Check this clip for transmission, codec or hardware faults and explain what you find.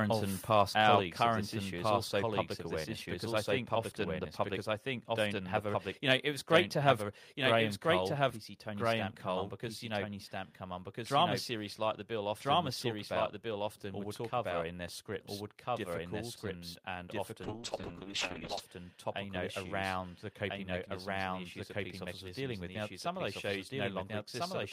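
Three kinds of fault are audible in this speech recording: a second copy of the whole track running behind the first, two small sudden level drops, and a brief stretch of coarse, muffled coding.

Doubled audio track (throughout): every phrase is heard again, at about the same loudness, roughly a second and a half later, clean and full-band with no reverberant tail. This is likely the same signal captured twice, with one path lagging behind the other.

Microphone volume stepped down (1.02 s and 7.32 s): the level drops abruptly by about 2 dB, first after "our current and past", just before "of this issue is", then again after "to have". Each is a single step, not a fade, pointing to the call software having trimmed the input gain.

Call bitrate drop (17.45 s to 18.67 s): after "scripts difficult and and", the speech turns rough and dull, staying at its worst for about 1.15 s before clearing by "uh you know around". 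The dulled highs and coarse texture fit the encoder being throttled from around 32 kbps to about 7 kbps.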